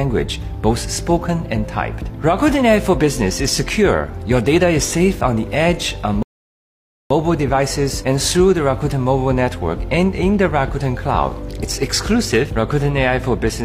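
A rebuffering stall at 6.23 to 7.10 s: playback ran out of downloaded audio and fell silent, then resumed exactly where it stopped, adding 0.88 s.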